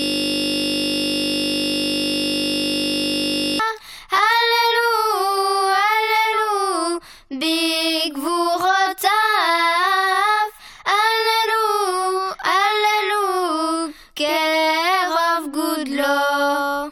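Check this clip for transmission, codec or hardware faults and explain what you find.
One hardware fault is present. A system hang loop runs from 0 to 3.6 s, already under way at the start: a frozen system let the sound hardware replay one 20 ms buffer, producing a steady 50 Hz buzz.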